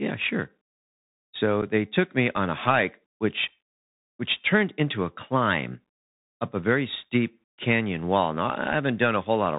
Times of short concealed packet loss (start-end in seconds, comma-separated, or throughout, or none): none